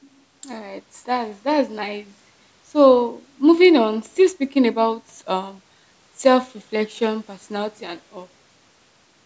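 No faults are audible in the speech; the call microphone processing trims the lowest bass and leaves nothing above 8 kHz, both as expected for that path.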